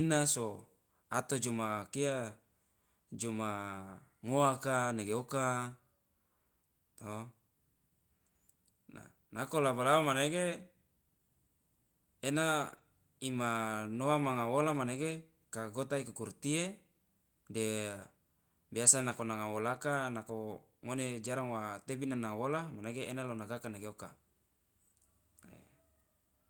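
Speech, with a lost packet rebuilt from error correction at about 12.69 to 12.79 s, where roughly 60 ms of rebuilt audio fits three 20 ms packets replaced by Opus's low-bitrate in-band copies. There is no dropout, but the sound turns briefly rough and noisy. The waveform stays continuous, while a spectrogram shows a short smeared, grainier band.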